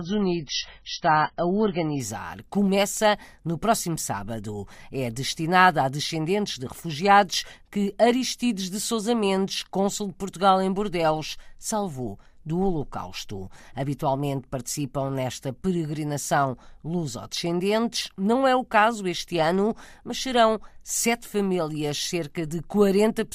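A speech recording that opens on an adaptive stream starting at a low bitrate. From 0 to 2.0 s the audio is dull, with nothing above 6 kHz and stronger codec artefacts, which points to a very low rate, near 16 kbit/s. At 2.0 s the player, having measured the connection, steps up to a fuller version, near 128 kbit/s, with no gap. A single clean upward jump, rather than steady coding damage or quality that drifts, marks it as a stream switch.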